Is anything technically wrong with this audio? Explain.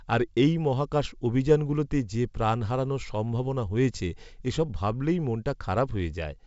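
No, nothing's wrong here; it's ordinary wideband telephone speech carried by G.722 coding, and nothing in the audio stands out as a problem.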